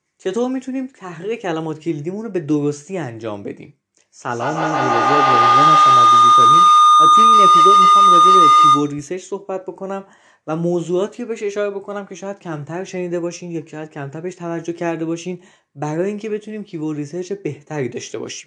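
From 4.19 s to 9.1 s a feedback howl takes over the speech: sound from a loudspeaker re-enters a microphone on the same call and comes back louder each trip, narrowing to a tone near 1 kHz. It swells to about 10 dB above the speech and pulses roughly every 150 ms, the loop's round-trip delay. On a spectrogram it shows as a thickening horizontal band near 1 kHz with regular beats; the waveform envelope balloons, then drops when the loop breaks.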